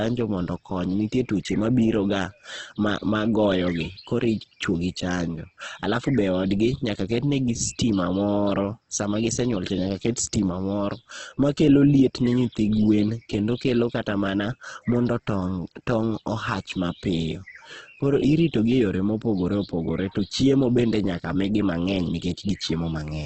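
From start to finish the speech sounds grainy and rough, with a noisy, hashy texture and nothing above about 8.2 kHz. The likely cause is heavy Opus compression in its CELT music mode, refilling starved bands with noise at a bitrate around 12 kbps.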